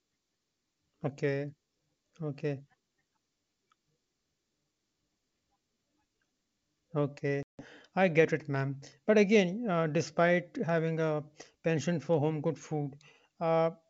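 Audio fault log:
7.43 to 7.66 s, packet loss on an ADPCM call: an abrupt 160 ms gap of silence, then brief distortion while the G.722 decoder's predictor and step size catch back up with the sender's.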